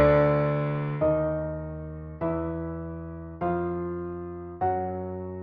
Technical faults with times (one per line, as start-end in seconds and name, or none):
none